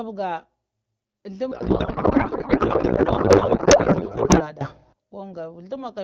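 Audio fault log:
1.51–4.50 s, codec payload misread: octet-aligned AMR-WB frames read as bandwidth-efficient scramble fields into garbled warble; spectrogram shows smeared, structureless energy replacing harmonics.
4.61–4.93 s, sudden gain jump: speech and background leap about 21 dB together, likely an unramped gain step; waveform envelope shows an abrupt vertical edge.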